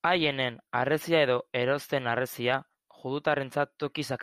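From 2.54 s to 4.04 s the speech carries periodic USB or driver dropouts: about four brief losses, one every 0.5 s, each skipping a tiny fraction of a millisecond of audio. They come through as small, evenly spaced ticks.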